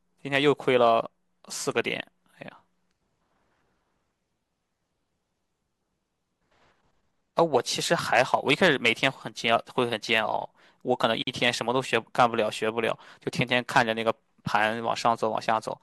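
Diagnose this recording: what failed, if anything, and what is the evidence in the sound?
The failure is at the codec stage: a gap at a join of encoded pieces, a 50 ms silence from 11.22 to 11.27 s in the speech. Separately encoded segments were joined with their encoder delay and end padding left in. Unlike a network dropout, nothing is lost; speech resumes exactly where it stopped, with smeared edges.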